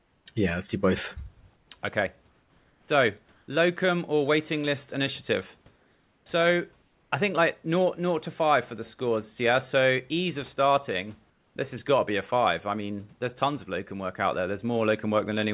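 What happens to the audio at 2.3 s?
From 2.30 to 2.88 s the background turns into a featureless hiss about 3 dB quieter, before "locum or waiting list". This is likely comfort noise in place of the background, synthesised while transmission paused.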